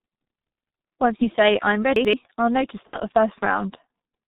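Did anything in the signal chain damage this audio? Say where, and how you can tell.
Yes. Three stages left marks on this speech.

At the codec stage, a G.723.1 codec runs throughout and the damage is heavy. The whole clip sounds muffled and hoarse, with smeared consonants. A spectrogram shows a hard ceiling at 4 kHz and coarse, blocky formant tracks. That fits the 6.3 kbit/s mode, which updates its vocal model only every 30 ms.

At the network stage, there is VoIP packet loss concealed by the speech codec at 1.16–1.25 s, just before "say i'm", and at 2.87–2.99 s, just after "I'll know to". In both places the sound smears into a fading buzz or coloured noise. On the waveform the envelope decays smoothly instead of following the syllables. The gaps point to one lost 30 ms frame and then two.

At the buffer or jitter stage, chunks are out of order at 1.96–2.13 s, between "say i'm" and "I'll know to". 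A segment of about 85 ms plays one chunk late, so the sound jumbles. The waveform shows three abrupt discontinuities at the joins, and the spectrogram shows vertical edges.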